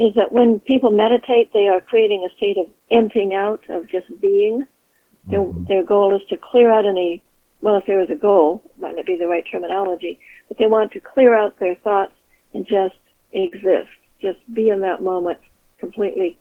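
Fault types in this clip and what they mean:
Short stall from a late packet: A packet arrived after its playout time, so the jitter buffer ran dry and the receiver held the last sound in place until the packet turned up, then carried on from exactly where it stopped. Nothing is lost, but the sound hangs unnaturally with a faint buzzy or dipped quality, for 40 ms at 8.31 s and 37 ms at 13.39 s. Each stall pushes the playback delay up by that same amount.
Jitter buffer speed-up: More audio had piled up in the buffer than the receiver wants to hold, so it trimmed the backlog by cutting out short pitch-period-sized slices again and again. From 12.17 to 12.38 s the sound plays at 114% speed with its pitch unchanged, shedding about 40 ms in total, which gives that stretch a rushed feel compared with the audio around it.
Short concealed packet loss: About 40 ms of audio never reached the decoder in time, so the receiver synthesised 38 ms of replacement by extending the preceding sound and then crossfaded back into the real signal. 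At 13.47 s, just after the second stall, this comes through as a brief smear or wobble where the genuine content is replaced by an extrapolated continuation.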